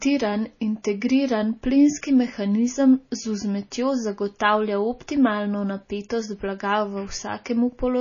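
Throughout the speech, the sound is watery and swirly, with nothing above 7.1 kHz, which points to heavy MP3 compression at a low bitrate around 24 kbps. Bits ran short, so the encoder is likely discarding treble and flickering weak frequency components frame by frame.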